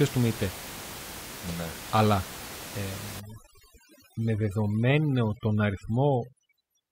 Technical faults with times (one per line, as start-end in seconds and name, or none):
3.20-6.91 overdone noise removal